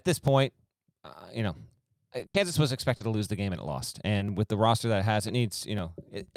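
From 0.28 to 6.28 s, periodic USB or driver dropouts skip roughly a millisecond of speech every 0.499 s, heard as regular ticks. Between 2.19 and 4.22 s, scattered short gaps, about four, up to roughly 70 ms each, are patched by extending the preceding sound, causing brief smears and hiccups.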